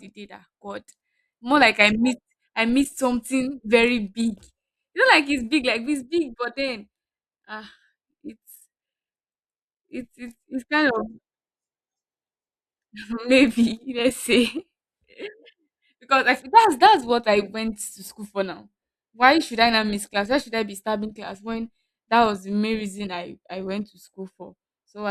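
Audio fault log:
20.14 s, underrun with held sample: just after "should I not miss", the output buffer ran dry for 5 ms. The converter held its last value, flattening the waveform briefly. Playback continued where it stopped, with nothing lost, so it resumes softly.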